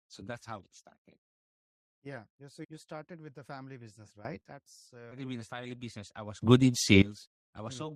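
A speech clip with two sudden gain jumps and one skipped stream segment. Right after "with the family business", from 4.25 to 4.41 s, the level leaps up by about 14 dB, voice and background noise together. The likely cause is a digital gain step applied without a ramp. A second jump, about 19 dB, runs from 6.42 to 7.02 s; both show as abrupt vertical steps in the waveform envelope and uniformly brighter bands across the spectrogram. At 5.11 s the sound cuts ahead, the pattern of a stream segment skipped after it failed to load, seen as a hard discontinuity in the waveform and a thin vertical line on the spectrogram.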